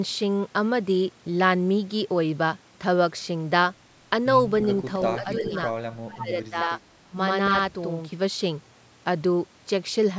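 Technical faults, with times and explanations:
4.59–4.65 s and 5.37–5.44 s, echo leak: a faint copy of earlier speech returns 334 ms late, roughly 15 dB and then 20 dB below the talker, likely from a loudspeaker echo the canceller missed. On a spectrogram, it shows as weak, smeared harmonic fragments offset from the direct sound.
4.96–8.12 s, channel delay (doubling): one channel runs 85.33 ms behind the other, which fits a 4096-sample buffer at 48 kHz. Summed to mono, this gives an equal-level slap or doubling. The waveform shows each onset repeated; the spectrogram shows comb-like notches.
5.18–5.56 s, 5.95–6.79 s and 7.08–7.16 s, speech suppressed in double talk: the talker dips by roughly 10 dB, then by as much as 25 dB, then by about 15 dB, likely because the canceller ducked speech while both sides were talking. The waveform envelope sags or gaps, and the spectrogram thins, especially at the top.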